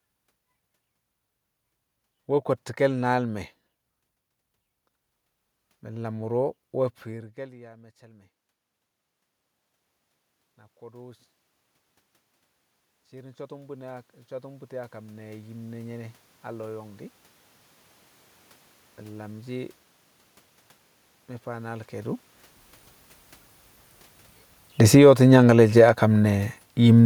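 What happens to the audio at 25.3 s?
Around 25.3 s the automatic gain is pumping. An automatic gain falling stretch runs from 24.78 to 27.01 s: the control judged the level too hot and eased it down by about 6 dB, so the sound and the room noise sink together. Overlapping it, from 25.09 to 26.21 s, there's automatic gain rising: the control briefly decided things were too quiet and pushed back up by about 4 dB, making the level swell again before settling.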